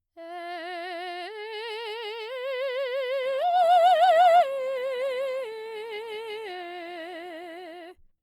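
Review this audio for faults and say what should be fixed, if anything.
From 3.22 s to the end of the music, the stream drops to a lower bitrate. The quality change is abrupt with no gap: coding artefacts become audible. The sound fits an adaptive player stepping down from an Opus stream near 64 kbit/s to one near 24 kbit/s after throughput fell, then never recovering before the clip ends. To prevent it, provide more network headroom or a larger playback buffer so the player can stay on the higher rendition.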